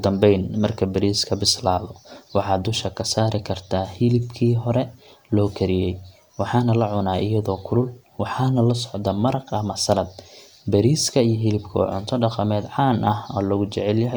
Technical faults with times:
none

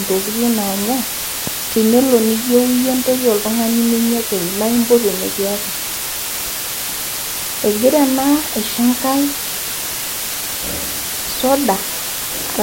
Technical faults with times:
0.00-12.62 low bit depth with dither

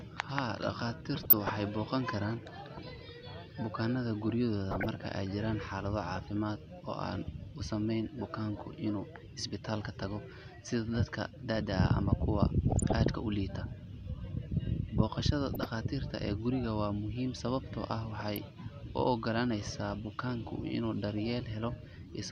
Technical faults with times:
1.23-1.61 DAB burbling
4.71-4.96 DAB burbling
12.70-12.96 DAB burbling
15.54-15.68 DAB burbling
18.17-18.38 DAB burbling

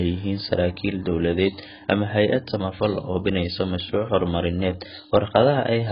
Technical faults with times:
0.00-5.91 AAC compression

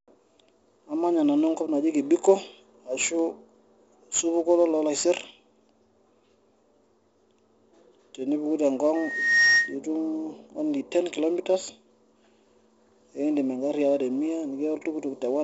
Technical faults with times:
0.00-15.43 4-bit ADPCM compression
8.95-9.75 loudspeaker feedback squeal

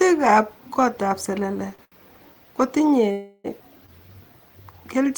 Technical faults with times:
1.75-1.95 short stall from a late packet
3.12-3.47 call audio freeze
3.86-3.91 short stall from a late packet

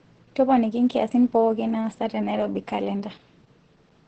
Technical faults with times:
0.00-4.07 Opus voice compression

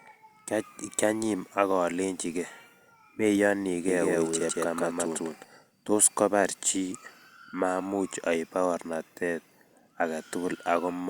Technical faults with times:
3.88-5.44 doubled audio track

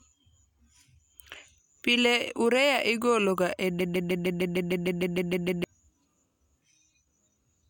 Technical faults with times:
3.80-5.64 broken-record loop

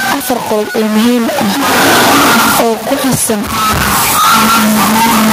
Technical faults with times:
0.00-5.33 stuck bit
0.00-5.33 gain pumping

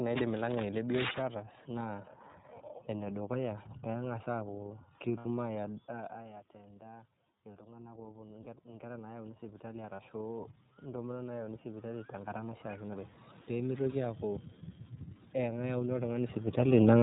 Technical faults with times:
0.00-17.03 iLBC codec
5.18-5.26 lost iLBC frames
5.60-13.18 automatic gain rising
8.43-8.47 lost iLBC frames
9.95-10.00 lost iLBC frames

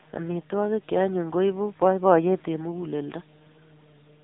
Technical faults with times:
0.00-4.24 AMR narrowband mobile codec

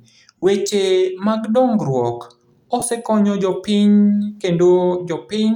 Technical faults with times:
0.38-0.43 lost LE Audio frames
2.79-2.82 lost LE Audio frames

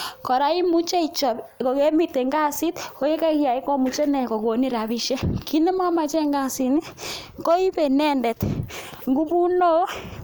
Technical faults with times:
none

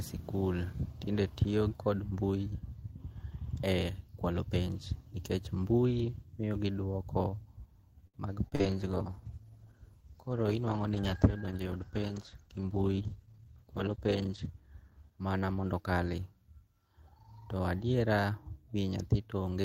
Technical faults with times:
8.07-8.71 repeated packet loss (robotic sound)
8.60-16.58 call bitrate drop
12.18-12.79 jitter buffer speed-up

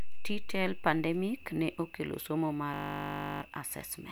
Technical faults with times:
2.74-3.42 system hang loop

